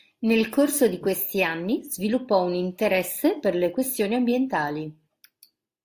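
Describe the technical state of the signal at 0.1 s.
At 0.1 s the speech signal is intact, with no audible fault at that moment.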